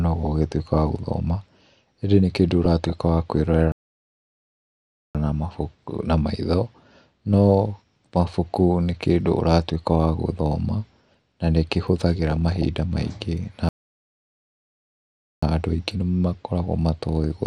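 Speech runs dull throughout, with a gurgling, granular edge and upper bands flickering in and out. That is likely MP2 compression at a low rate, consistent with about 80 kbps. DAB burbling appears at 2.65–2.93 s and 12.28–12.66 s. These bursts come from a small error rate corrupting the sub-band data. The sound halts mid-flow at 3.72–5.15 s, about 1.4 s, and at 13.69–15.43 s, about 1.7 s. These are playback stalls, likely from the player running short of data.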